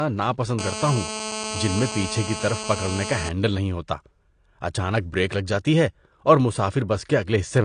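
Low-bitrate audio saved at a high bitrate runs throughout this speech: nothing exists above 9.9 kHz, and the artefacts likely come from a low-bitrate earlier encoding that the later high-bitrate MP3 preserves but cannot restore.

GSM phone buzz appears from 0.59 to 3.29 s. A nearby 2G phone on a call pulses 217 times per second, and the rectified bursts produce a steady, raspy, harmonic-rich buzz about 7 dB below the speech.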